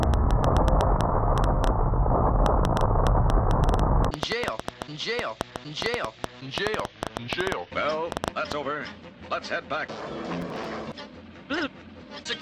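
From 0.03 to 8.53 s the audio carries a train of clicks: about 50 same-shaped pulses, unevenly spaced at 6.6 per second and roughly 15 dB above the signal, most likely interference or a faulty connection or power supply. From 10.41 to 10.65 s a short processor overload crackle sounds grittier and tearing rather than ticking. A handful of missed deadlines repeat old audio with hard edges, which fits buffers of around 3 ms.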